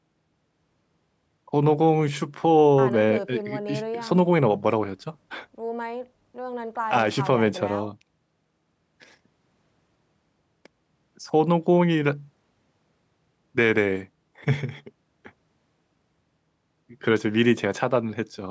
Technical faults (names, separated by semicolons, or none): none